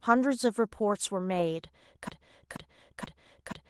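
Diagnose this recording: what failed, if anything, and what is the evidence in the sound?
Playback or streaming failed with a broken-record loop. From 2.09 s to the end, a 479 ms fragment of speech repeats exactly, back to back. The likely cause is a stalled player or stream resending the last buffer it held. The speech that belonged there is gone.

The network stage shows short concealed packet loss. Between 2.53 and 2.57 s there is a brief smear. About 20 ms of audio arrived too late to decode. The receiver filled the gap by extending the preceding sound, then blended back into the real signal.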